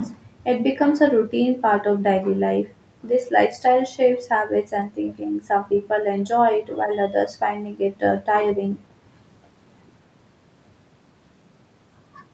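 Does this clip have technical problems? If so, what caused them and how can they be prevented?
Yes. At 5.11 to 5.15 s, a faint delayed copy of the speech, about 30 dB down and 250 ms late, is likely echo leak from an incompletely cancelled loudspeaker pickup. Using a headset, or tuning the far end's echo canceller, prevents it.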